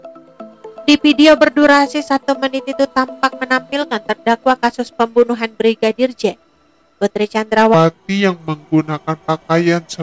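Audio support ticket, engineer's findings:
From 7.74 s to end: audio drops about 5.5 semitones and slows to 0.73x. Wrong sample rate, no conversion; fits 22 kHz material played at 16 kHz.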